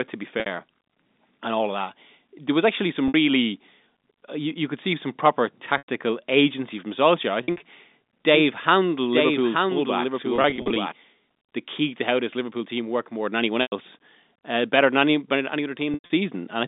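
Packet loss with pitch repetition hits at 0.40 s after "to be", at 3.08 s after "was actually some", and at 5.78 s before "agency from". Each gap lasts 60 to 100 ms. The receiver loops the last pitch period, so the sound holds briefly with a buzzy tone. At 7.44 s, 100 ms of losses are scattered over 160 ms.

From 8.34 to 10.92 s there is a doubled audio track. A copy about 5 dB quieter trails roughly a second behind. It is a clean echo with no room tone, and it starts and stops abruptly. A second, slower capture path is the likely cause.

Pitch-repetition losses return at 10.36 s, 13.62 s and 15.94 s. At 10.36 s, 160 ms are lost across 400 ms. At 15.94 s, a 100 ms run fades toward silence before the sound cross-fades back in. Throughout, the narrow telephone band of the G.711 line is audible.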